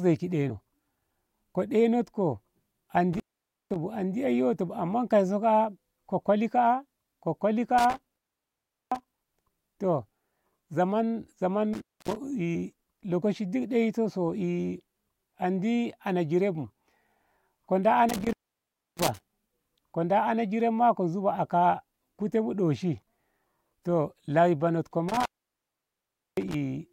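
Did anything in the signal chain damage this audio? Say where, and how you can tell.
Yes. An intermittent contact in the analogue wiring cuts the speech out five times: 3.13–3.76 s, 7.78–9.31 s, 11.73–12.16 s, 18.09–19.21 s and 25.08–26.54 s. The dropouts last from about 0.27 to 1.12 s. Each has crackle at its edges as a loose plug or cable connection opens and then recloses.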